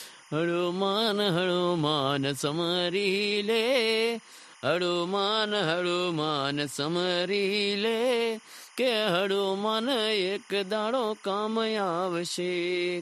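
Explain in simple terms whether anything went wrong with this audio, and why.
Timecode bleed runs through the whole recording, from start to finish. Behind the speech there is a faint, steady chirping warble that never lets up. It comes from timecode, a timing signal used to keep recording machines in sync, leaking in from a nearby track or cable. That signal flips between two high pitches, around 1 kHz and 2 kHz, in a pattern that repeats 25 times a second, which creates the constant warbling sound sitting well below the speech.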